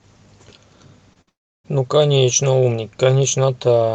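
At 1.13 to 1.17 s there is a short concealed packet loss. About 20 ms of audio never arrived, and the decoder papered over it by extending the preceding sound. It is heard as a brief smear or wobble. On a spectrogram the preceding sound runs on unnaturally smooth for a moment, with no sharp edge.

From 1.21 to 1.29 s a burst of packet loss removes about 60 ms. The receiver keeps repeating the last sound and lowers it as it goes, so you hear a brief held buzz or hiss that fades. The waveform shows a decaying, oddly regular stretch before the audio resumes further along.

From 1.29 to 1.66 s comes what is likely a long network dropout, with about 360 ms gone. A short fading continuation gives way to near silence lasting about a third of a second. This shows as a blank band on the spectrogram and a flat line in the waveform. Throughout, the Opus call path caps content near 8 kHz, consistent with a 32 kbps setting.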